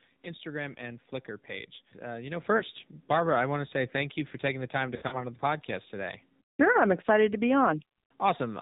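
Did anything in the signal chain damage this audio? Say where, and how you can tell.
Yes. Throughout, the speech sounds buzzy and synthetic with nothing above 4 kHz: the AMR narrowband mobile codec at the codec stage, its coarse pulse modelling fitting a low rate near 7.4 kbps.

At 2.4 s, right after "you know", speech and background jump together by about 7 dB: the microphone volume stepped up, as call processing raised the input gain in one step.

At 2.6 s a brief 20 ms warbly dip, then from 4.96 to 5.22 s, between "taking the time to" and "the podcast today", drawn-out fading sound: lost AMR speech frames from network errors, the decoder repeating stale settings.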